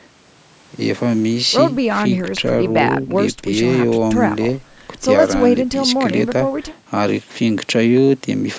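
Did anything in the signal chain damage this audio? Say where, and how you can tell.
No, nothing in this speech recording stood out as damaged on listening, with the call microphone processing it passed through sounding as that stage normally does.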